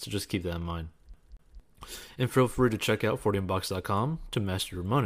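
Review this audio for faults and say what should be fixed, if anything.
A CD stuck on one turn repeats a 0.23 s speech fragment twice from 1.14 to 1.60 s, just after "keep that in mind". A scratch keeps throwing the laser back one track. The brief mute at each jump and the fixed loop length set it apart from a buffer-repeat glitch. Re-rip from a clean disc with a secure, error-checking ripper.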